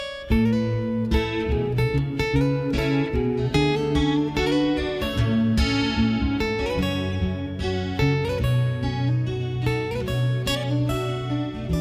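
At 7.12 to 7.14 s there is a corrupt frame decoded. A couple of compressed frames arrived with damaged bits, and the decoder played them anyway. Misread values put energy at wrong frequencies. It sounds like a brief, quiet chirp, squeak, blip or burst of noise, peaking around -30 dBFS.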